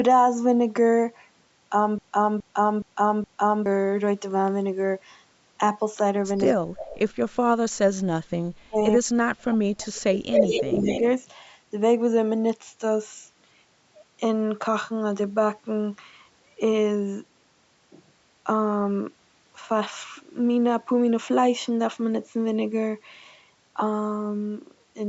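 From 1.98 to 3.66 s the playback likely stalled and kept resending the last fragment it held, producing a broken-record loop. A 0.42 s slice of speech repeats exactly, back to back, four times. It makes a mechanical stutter with no variation between passes, and the speech that should have filled those seconds is gone.

At 6.36 to 6.53 s an echo leak appears, likely because the far end plays the call on a loudspeaker and its echo canceller let some of the microphone pickup through. A copy of the speech returns 107 ms late, faint and well below the direct sound. From 6.53 to 6.87 s both sides likely talk at once and the canceller clamps down, so the speech is suppressed in double talk and drops steeply for about a third of a second. The echo leaks again at 6.86 to 6.99 s, still 107 ms behind and clearly more audible than before, about 10 dB louder.

The same double-talk suppression returns at 7.49 to 8.16 s, taking out about 0.7 s with a deep dip. 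It comes back at 8.41 to 11.02 s, where the speech cuts out or sinks in pieces for about 2 s in total. Inside that stretch, from 10.32 to 11.0 s, the echo leak is at its worst. The returning copy now trails by 202 ms and is about as loud as the speech itself, so a distinct second voice layer is heard. Throughout, the call's microphone processing removes the lowest bass as expected, and nothing is present above 8 kHz.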